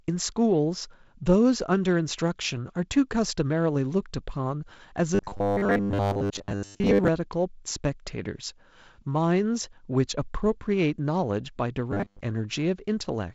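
Robotic sound from repeated short buffers appears from 5.15 to 7.08 s and again from 11.92 to 12.22 s. The speech turns into a rigid, metallic buzz pitched at 100 Hz, which still loosely tracks the talker. The likely cause is audio arriving too seldom, so playback loops a 10 ms fragment to fill the gaps, skipping most of the real audio. The wideband telephone band, ending near 7 kHz, carries the buzz during both spans.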